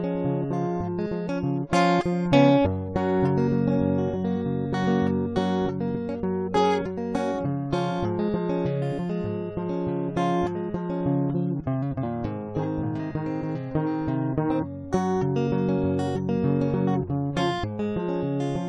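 Nothing in the music gives a listener anything technical to flag at any point along the way.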